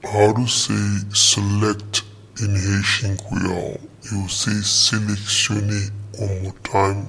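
Wrong sample rate throughout. Playback runs at about 0.69 times speed, dropping pitch roughly 6.5 semitones, which fits 32 kHz audio played at 22 kHz. Everything sounds slow and low.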